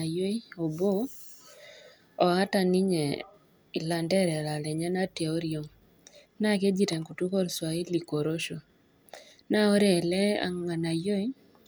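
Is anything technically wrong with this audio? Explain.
No, nothing technically wrong can be heard in this speech recording. There is no fault here to explain.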